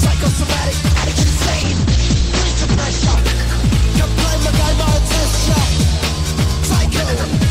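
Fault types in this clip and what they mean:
call bitrate drop: starved of bits, the encoder loses everything above 8 kHz and turns coarse and watery, unlike a low-pass filter, which stays clean.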